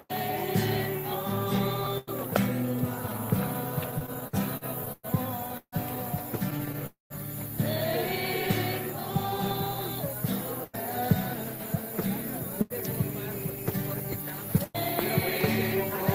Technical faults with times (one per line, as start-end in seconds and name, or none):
3.91-5.06 repeated stalls (stutter)
5.57-5.75 call audio freeze
6.50-6.83 repeated stalls (stutter)
6.86-7.13 call audio freeze